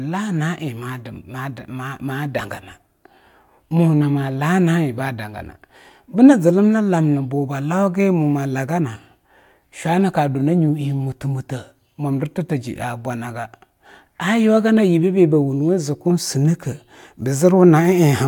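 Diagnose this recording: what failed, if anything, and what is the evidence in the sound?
Nothing failed in this speech recording. No stage of the chain, from capture through to playback, leaves any audible evidence of a problem.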